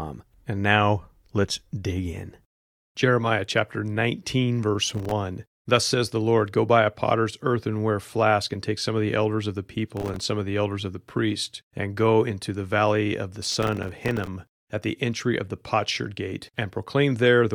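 Processor overload crackle tears through the speech at 4.87–5.12 s, 9.97–10.21 s after "the elders of the", and 13.42–14.27 s after "the valley of the". Dozens of roughly 1.5 ms buffers miss their deadlines and drop to silence. On the waveform these show as dense, hard-edged gaps, and on the spectrogram as broadband vertical streaks.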